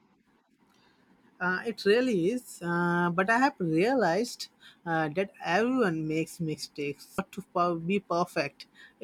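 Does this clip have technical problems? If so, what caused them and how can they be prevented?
Yes. At 7.18 s the speech jumps ahead with a brief blip, and part of the programme is gone. This is likely a stream segment skipped. One segment failed to load, so the player moved straight on to the next. Retrying failed segments before playback reaches them prevents this.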